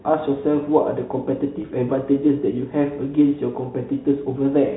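At 1.62 to 1.64 s, packet loss with pitch repetition occurs. About 20 ms went missing, which fits a single lost packet. The last pitch period repeats, giving a briefly held, buzzy speech sound over the telephone-band G.711 coding.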